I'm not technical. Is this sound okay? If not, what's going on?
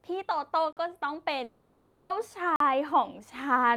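No, there are a few problems. At about 0.73 s and again at 2.56 s, the speech briefly drops out for roughly 43 ms. These are blocks of digital silence: the audio cuts to total silence and back, which fits a 2048-sample buffer that wasn't filled in time.

From 1.44 s to 2.12 s there's a longer gap, about two-thirds of a second, most likely a long network dropout. Instead of the speech, you hear the last bit of sound stretched into a fading buzzy hiss, and when the speech returns, that stretch is simply missing.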